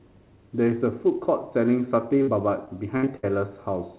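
At 2.22 to 2.29 s, a burst of packet loss drops about 60 ms of audio; the receiver stretches the last sound into a fading fill before jumping ahead. From 2.65 to 3.25 s, repeated packet loss opens four gaps, the longest 64 ms, and patching about a quarter of that span leaves choppy, robotic speech. Throughout, the narrowband call path cuts everything above 4 kHz, which fits G.711.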